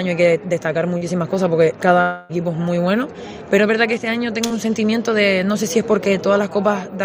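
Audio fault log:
0.97–1.03 s and 4.47–4.52 s: short concealed packet loss. About 40 ms, then 20 ms, never arrived, so the decoder extended the preceding sound, leaving a brief smear.
2.01–2.31 s: long network dropout. About 0.28 s is replaced by a fading synthetic continuation of the preceding sound, without silence, likely from a lost run of packets.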